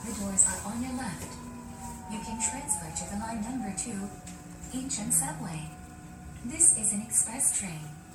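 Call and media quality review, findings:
Generation loss, throughout. Swirly, smeared, hollow texture with blurred attacks, worse than a single encode would give. Likely repeated MP3 re-encoding, around ten passes, consistent with 96 kbit/s, each pass requantising on a shifted frame grid and compounding noise and spectral holes.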